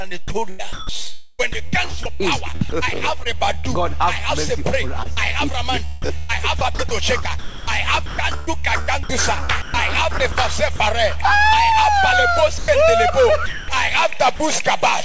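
From 0.02 to 3.65 s the sound turns choppy, with about 818 ms traded for synthetic hiss. This is likely sound chopped by the voice detector, which repeatedly stopped sending and let comfort noise fill the gaps. Inside that stretch, at 2.70 s, a 20 ms sliver vanishes into steady noise, likely sound dropped by the voice detector as it briefly judged the signal to be background.

The same choppiness returns from 5.03 to 6.31 s (about 185 ms replaced), 6.59 to 9.50 s (about 797 ms) and 9.62 to 10.80 s (about 220 ms), again likely from the detector toggling transmission on and off.

Later the sound gives way to plain steady noise from 12.58 to 12.68 s (100 ms), 13.46 to 13.68 s (220 ms) and 14.36 to 14.40 s (40 ms). Each time it is likely sound dropped by the voice detector, with comfort noise played until transmission resumed. Throughout, the call codec leaves nothing above 8 kHz.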